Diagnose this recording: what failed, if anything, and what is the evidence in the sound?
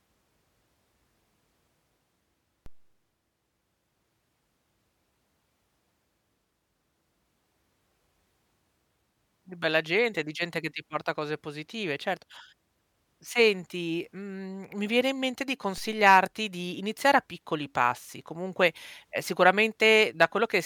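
A DC step at the converter stage: at 2.66 s and again at 15.78 s, just after "viene in mente di", a low thump sounds while the speech carries on intact. The waveform's zero line jumps by about -35 dBFS, then drains away through a 2 Hz high-pass. A baseline shift rather than a gap, so not a dropout click.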